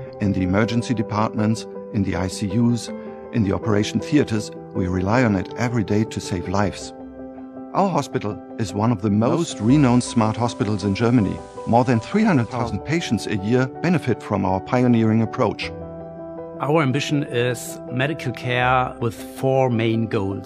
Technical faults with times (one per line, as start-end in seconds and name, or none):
9.15-12.80 digital radio blending to analogue